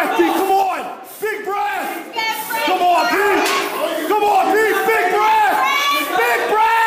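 At 0.63 s a sudden gain jump drops the level by about 6 dB in a single step, taking the background noise down with it, and the level snaps back up at 2.16 s. This likely comes from a digital gain change applied without a ramp.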